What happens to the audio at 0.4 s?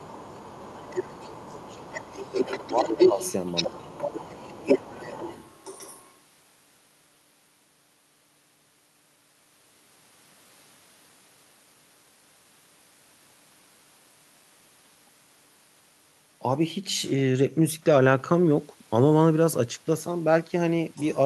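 At 0.4 s you're inside a stretch of speech suppressed in double talk, running from 0.06 to 3.19 s. The talker's level sags by as much as roughly 20 dB. That's likely an echo canceller ducking everything because it couldn't separate near and far talkers.

Overlapping that, between 0.21 and 0.68 s, you can catch the other side's voice leaking through, a faint second voice sitting around 25 dB under the speech. It's likely loudspeaker pickup the echo canceller didn't fully remove.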